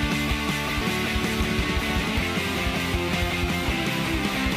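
At 0.82 s and again at 4.34 s there is a brief glitch caused by damaged data in a compressed stream. Corrupted bytes make the decoder misread the affected frames and lose sync until it finds the next valid frame header.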